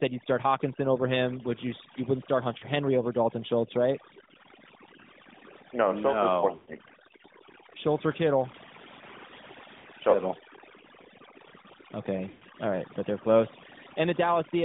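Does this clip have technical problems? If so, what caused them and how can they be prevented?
Yes. The background drops and breaks up into twinkling specks. This is overdone noise removal: a noise reducer set too strong pulled frequency bands down whenever they neared its noise estimate, taking the quieter parts of the speech with them. A gentler reduction setting, checked by ear before export, would prevent it.

The whole clip sounds boxed in and buzzy, confined to roughly 150 Hz to 3.7 kHz with a synthetic edge. This comes from the AMR narrowband mobile codec, which models the voice from a few pulses per frame, and the roughness fits a mid-range bitrate around 10 kbps. Using a wideband codec or a direct recording path would prevent it.

Brief dropouts come at 2.58 to 2.66 s just after "wouldn't start", at 6.56 to 6.74 s after "no is", at 9.78 to 9.87 s, and at 12.30 to 12.43 s. The sound smears, then fades for 40 to 120 ms before returning rough. 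These are lost AMR speech frames: radio errors corrupted frames, and the decoder stretched the last good settings with falling gain. A stronger signal or better error protection on the link would prevent them.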